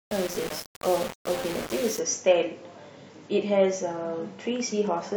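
From 0 to 1.99 s the speech was likely reduced to low bit depth without dither, rounded to very few levels, which fits about 4 bits. The error tracks the speech, so it turns coarse and grainy, with distortion around 10 dB below the signal, and quieter stretches sputter.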